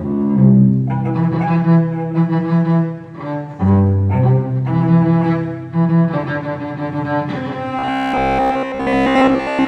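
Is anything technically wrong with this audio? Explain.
Yes, there's a problem near the end. From about 7.79 s until the clip finishes, you get robotic sound from repeated short buffers. The sound goes rigid and metallic, with a steady buzz around 66.7 Hz laid over it. It still roughly tracks the original contour. The likely cause is new audio arriving too slowly, so the software fills the gaps by looping roughly 15 ms chunks, which fits that buzz frequency. It does this for most of that stretch while the real audio gets skipped.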